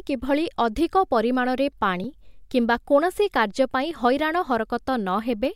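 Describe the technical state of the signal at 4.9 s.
At 4.9 s the speech signal is intact, with no fault present at that moment.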